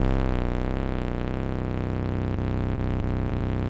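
Everyday sounds, carried over a call link with nothing above 8 kHz. Between 2.76 and 3.43 s there are scattered short gaps. About four tiny holes, none much over 15 ms, were bridged by extending the preceding sound. The result is brief ticks and smears.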